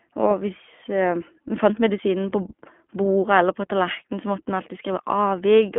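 Throughout, the speech carries plainly audible iLBC codec damage. Band-limited to 200 Hz–3.4 kHz, it sounds rough and synthetic because each frame's excitation is coded independently, consistent with 20 ms frames at 15.2 kbps. A spectrogram shows nothing above 3.4 kHz.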